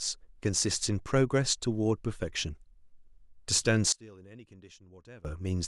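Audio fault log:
3.92–5.25 s, one channel inverted: when the speech is summed to mono, its level suddenly drops by about 24 dB, leaving only a faint residue of the speech for roughly 1.3 s before the level returns. The likely cause is reversed polarity on one stereo channel. The centred speech component common to left and right then cancels in the sum, so only the small difference between the channels remains audible.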